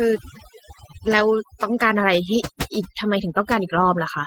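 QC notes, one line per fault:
throughout, overdone noise removal: A noise reduction stage was set far too aggressively, so any frequency band that came close to its noise estimate was pulled down hard or shut off entirely, and the quieter parts of the speech were caught along with the noise. The background drops and breaks up into twinkling specks.
throughout, Opus voice compression: The speech went through Opus in hybrid mode, with the linear-prediction coder handling the band up to 8 kHz and a transform layer adding content above that, out to a fullband ceiling near 20.2 kHz. The coarse coding of the excitation gives plainly audible damage: the speech comes out muffled and hoarse with a slightly robotic edge. This fits a low rate around 16 kbps with 20 ms frames.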